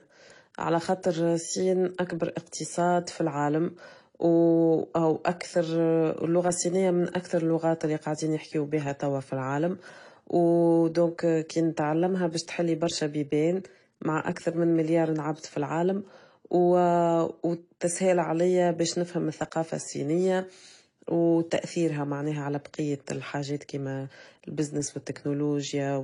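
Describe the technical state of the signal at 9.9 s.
At 9.9 s the speech shows transcoding between lossy codecs, likely AAC-LC then HE-AAC. Their artefacts stack and are heard together, with nothing above 11.3 kHz, and this continues throughout the clip.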